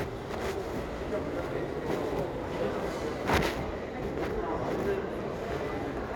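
From 0.0 to 3.33 s, crude rate conversion: samples were repeated by nearest-neighbour picking with no filtering, which fits a 44.1 kHz to 48 kHz change. The periodic error, around 30 dB below the signal, adds a gritty, inharmonic fizz trailing the loud and bright sound.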